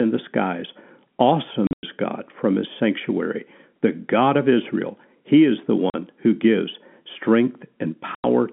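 Packet loss filled with silence punches hard-edged holes into the narrowband telephone speech at 1.67–1.83 s (the longest run is 100 ms), 5.90–5.94 s and 8.15–8.24 s. The gap lengths fit 10 ms packets. A waveform shows flat near-silent stretches with abrupt cut-offs, and a spectrogram shows blank vertical bars.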